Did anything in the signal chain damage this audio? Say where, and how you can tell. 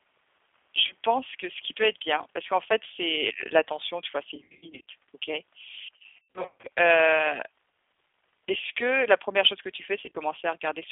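Yes. G.729 codec damage runs throughout: the sound is confined to roughly 300 Hz to 3.5 kHz, with a rough, synthetic texture that points to an 8 kbit/s G.729A stream. The codec rebuilds speech from a vocal tract filter, a pitch predictor and a few pulses per frame, so fine detail is discarded at the codec stage.

VoIP packet loss concealed by the speech codec appears on the network side at 0.87–0.92 s just before "pense que ce qui", 4.36–4.85 s after "l'attention tu vois c'est", 5.96–6.66 s, and 10.01–10.17 s after "chose que tu". The later three are scattered gaps with runs up to 90 ms. The decoder extends its last pitch and filter into a fading buzzy tone or coloured noise, and the audio stays weakened briefly as each rebuilt frame feeds the next.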